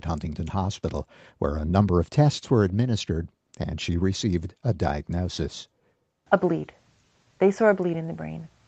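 Speech carried over a normal call path, with microphone processing and a codec that together limit the audio to about 8 kHz as expected for this kind of connection, and no technical fault can be heard anywhere in it.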